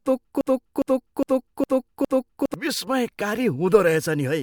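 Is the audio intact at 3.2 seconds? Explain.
Yes, at 3.2 seconds the speech plays through cleanly, with no dropout, click, distortion or other fault.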